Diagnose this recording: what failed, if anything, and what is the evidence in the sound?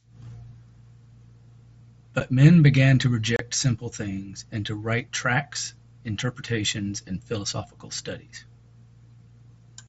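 Unconcealed Bluetooth headset packet loss on the wireless link between headset and phone. The speech drops out abruptly at 2.2 s and again from 3.36 to 3.40 s. The gaps of about 7.5 ms and 30 ms fit one and four lost mSBC frames left unfilled, with silence or an idle pattern in their place.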